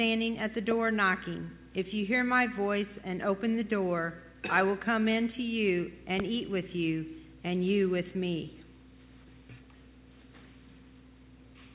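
Two loud pops land on the track, the first at 0.71 to 0.74 s and the second at 6.20 to 6.22 s. Each is a single sharp hit, around 15 dB louder than the sound around it, and the audio carries straight on underneath. They're likely sudden voltage spikes from a plug, switch or static discharge, shaped into a short pulse by the circuitry after them. The call path caps everything at 4 kHz, which fits a narrowband G.711 link.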